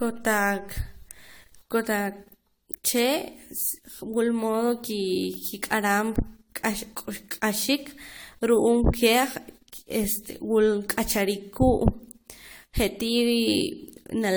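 From start to finish the speech carries generation loss: swirly, hollow smearing and softened attacks, likely from roughly seven successive AAC re-encodes at around 96 kbit/s.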